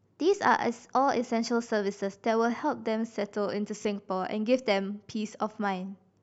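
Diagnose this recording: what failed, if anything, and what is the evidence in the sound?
A Bluetooth stutter occurs at 3.83 to 3.85 s in this speech recording. The failure lies in the wireless link to the playback device. Roughly 20 ms of audio went missing, and the receiver filled the gap by replaying its last buffered slice. That replay is heard as a brief repeated fragment instead of silence. The speech then resumes further along, as though it had kept playing, and the size of the skip fits a single lost packet.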